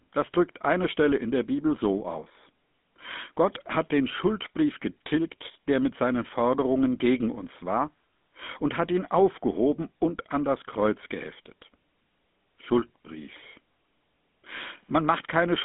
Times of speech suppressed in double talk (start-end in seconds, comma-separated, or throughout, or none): none